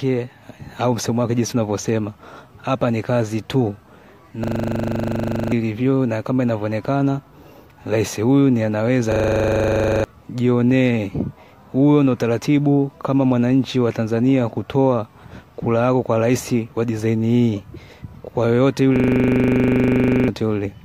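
A rattling stutter replays one 40 ms fragment 25 times a second at 4.44–5.52 s, 9.12–10.04 s and 18.96–20.28 s, each time losing a second or more of audio. This is a system hang loop: the system froze while the hardware kept cycling one ring buffer.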